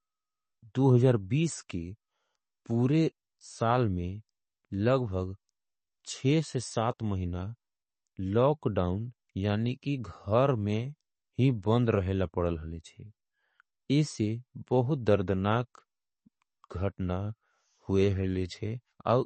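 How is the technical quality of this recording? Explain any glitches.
The recording has plainly audible codec damage throughout, plus one brief pre-echo.

MP3 compression is the likely cause of the dull, watery quality across the whole speech clip. Nothing is heard above 8.3 kHz. The encoder ran short of bits and cut the treble there. Weak detail flickers in and out. That fits a low bitrate of around 32 kbps.

A pre-echo occurs at 15.06 s. A short hiss arrives about 10 ms before a sharp onset. The codec spread its quantisation noise across the whole block, so noise meant for the loud attack leaks into the quiet moment before it.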